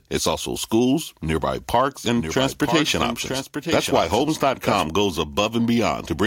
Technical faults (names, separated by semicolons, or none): doubled audio track